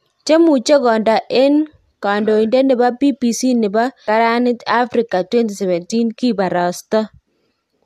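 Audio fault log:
4.07 s, stream segment skipped: the speech jumps abruptly ahead with a brief blip, likely because one segment of the stream failed to load and playback resumed at the next. Unlike a dropout, there is no silent gap; the sound simply continues from a later point.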